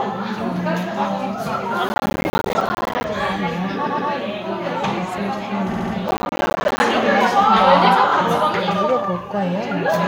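Everyday sound here, with two kinds of trouble. Processor overload crackle hits from 1.89 to 3.04 s and again from 6.08 to 6.80 s: the machine keeps missing its deadlines on short buffers, around 10 ms each, and dozens of them drop out as tiny silent gaps, so you hear a gritty tearing until the load eases. There are also repeated frames. A 116.1 ms chunk plays twice extra at 3.86 to 4.09 s, adding 232.2 ms, which fits a handful of frames. A 69.7 ms chunk plays three extra times at 5.71 to 5.92 s, adding 209 ms. A 23.2 ms chunk repeats once at 8.08 to 8.11 s. Each one is a little stutter.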